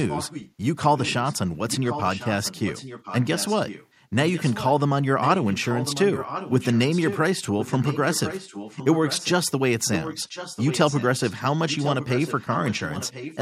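A delayed second copy of the speech trails the original by about 1.05 s, roughly 10 to 15 dB quieter, at 0.0–0.52, 0.96–1.33, 1.7–3.87, 4.33–4.72, 5.2–7.19, 7.6–9.3, 9.93–11.33 and 11.69–13.39 s. This is echo leak, likely a loudspeaker-side echo canceller passing its microphone pickup back.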